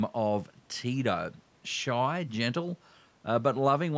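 A speech recording that came through a call's microphone processing, with nothing technically wrong with it.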